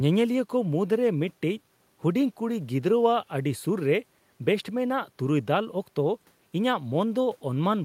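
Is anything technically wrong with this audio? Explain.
No, nothing technically wrong can be heard here.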